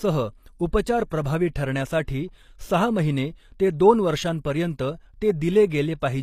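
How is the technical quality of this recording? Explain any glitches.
Technical quality is fairly rough; the codec damage is easy to hear.

Throughout, the treble above the midrange sounds synthetic and gritty, with s sounds going metallic and nothing above 14.9 kHz. That's likely HE-AAC compression rebuilding the top band from copied lower bands, which points to a low bitrate around 24 kbps.

There's pre-echo at 0.82–0.86 s, 1.09–1.11 s and 1.24 s. The codec's block noise leaks ahead of sharp attacks as brief hiss, up to 48 ms, smearing their onsets.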